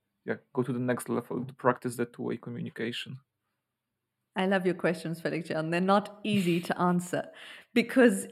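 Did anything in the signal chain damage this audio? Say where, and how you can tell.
Yes. The damage occurs where two channels are summed to mono, one arriving a few samples late, about 0.07 ms, which fits a small buffer or driver offset. It causes channel delay (comb filtering) across the whole speech clip: a fixed notch around 7 kHz makes the top end sound hollow and phasey. Unlike a codec's low-pass, which cuts everything above a limit, this notch stays put and leaves energy on either side of it.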